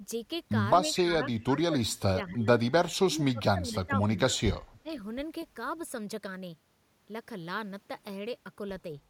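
Speech, with brief faint repeats arriving about 231 ms late at 0.95–1.02 s and 3.71–3.75 s, around 15 to 25 dB below the speech. This is likely an echo leak, where the far end's echo canceller let some of its loudspeaker pickup back through. The talker's speech also dips, by up to roughly 25 dB, at 1.0–2.47 s, 3.1–4.03 s, 4.3–4.38 s and 4.83–4.91 s. This is speech suppressed in double talk, likely because the canceller could not separate the talker from the echo while both sides spoke, so it turned both down.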